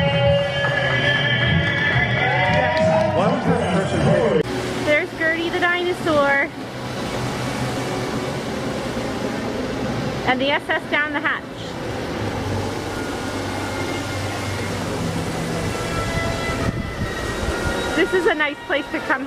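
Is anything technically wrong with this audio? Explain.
No, no technical faults found.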